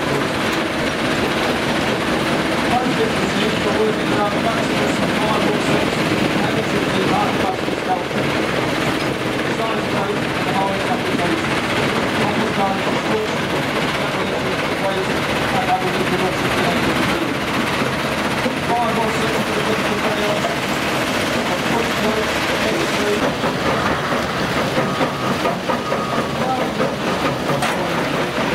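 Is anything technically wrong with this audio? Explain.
Yes. A repeated buffer occurs at 0.84–0.86 s (one extra play) and 13.21–13.26 s (two extra plays). Late data made the device replay its last 23 ms block, which fits a 1024-sample buffer. It sounds like a brief stutter, and the waveform shows identical copied segments with hard joins.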